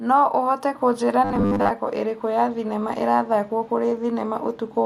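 Robotic sound from repeated short buffers runs from 1.25 to 1.72 s, turning the speech into a rigid, metallic buzz pitched at 100 Hz. The likely cause is a starved audio stream, with roughly 10 ms chunks replayed over most of that stretch while real audio is skipped.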